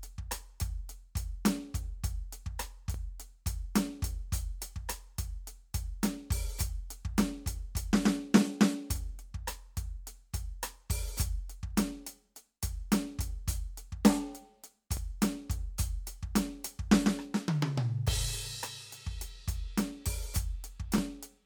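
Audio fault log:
2.94, 14.97 and 20.98 s: overlapping chunks. The music was handled in 6-second blocks, and each new block starts about 13 ms before the previous one finished, so that sliver of audio plays twice at the seam. Doubling such a short piece breaks the waveform's continuity, and you hear it as a quick click or tiny stutter rather than an obvious repeat. The spacing of the hits follows that 6-second chunk grid.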